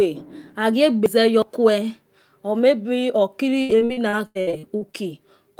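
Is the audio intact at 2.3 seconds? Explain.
Yes, the speech at 2.3 seconds plays through intact, with no dropout, glitch or other fault at that point.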